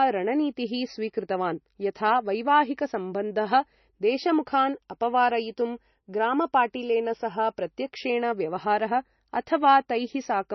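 Speech, and the whole clip sounds band-limited and a bit swirly: nothing comes through above 6 kHz, so sibilants are dull and the top end is simply gone. That's likely low-bitrate audio saved at a high bitrate, with an earlier MP3 pass at something around 26 kbit/s stripping the detail before a re-encode at roughly 164 kbit/s. The bigger file can't bring back what the first encode threw away.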